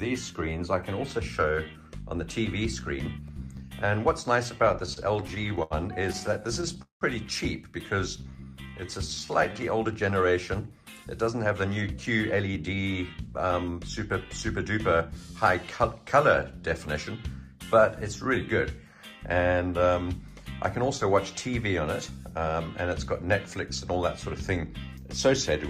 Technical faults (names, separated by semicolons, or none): repeated stalls (stutter); jitter buffer slow-down; jitter buffer speed-up